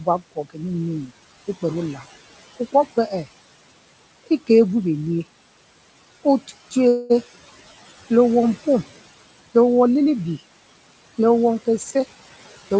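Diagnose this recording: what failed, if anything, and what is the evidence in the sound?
Speech cut by the noise suppressor, call processing: between 0.0 and 0.6 s about 150 ms of speech dips by up to about 16 dB, showing as faded spectrogram patches.

Call audio freeze, network and jitter buffer: at 6.88 to 7.12 s a 219 ms fading buzz appears, likely from late packets emptying the buffer. The waveform shows smeared repetition, then speech resumes intact.

Jitter buffer speed-up: from 11.77 to 12.77 s speech runs at 115% speed, same pitch, as roughly 150 ms of pitch periods are cut, compressing spectrogram timing.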